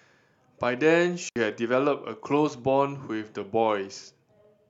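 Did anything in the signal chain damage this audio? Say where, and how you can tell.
Yes, a digital wireless dropout on the radio link. From 1.29 to 1.36 s the speech falls to near silence for about 70 ms, with no burst of noise on either side: the receiver lost too much data and briefly muted its output. On a spectrogram this shows as a clean blank vertical gap across all frequencies, and on the waveform as a flat stretch with very short fades at each edge.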